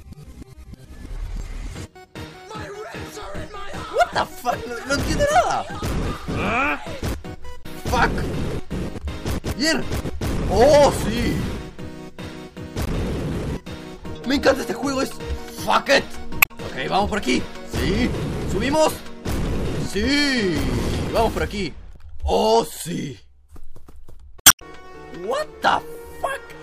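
Damaged data in a compressed stream made the decoder misread frames and lose sync, producing brief glitches at 7.62–7.66, 12.84–12.89, 16.39–16.51, 21.93–21.97 and 24.38–24.62 s, the last stretching the audio by about 43 ms.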